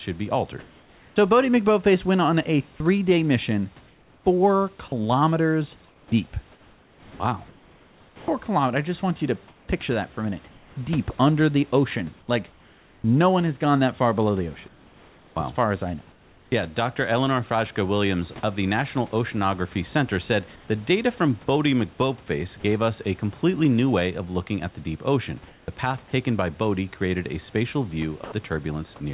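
From 0.6 to 16.52 s the speech is chopped by the voice detector, likely switching on and off repeatedly. About 4.8 s in total is swapped for synthetic noise, unlike a single clean dropout.

At 22.60–22.64 s, just before "us a completely new", and at 28.24–28.32 s, after "created a spatial", sound is likely dropped by the voice detector. Each time, a brief stretch of sound gives way to steady noise or near silence, once rather than repeatedly.

Between "at the deep ocean" and "path taken by", at 25.48–25.68 s, comfort noise likely replaces the background. No speech is lost, only the real room texture, which becomes a featureless hiss about 3 dB quieter. Through the G.711 call path, nothing above 4 kHz is heard.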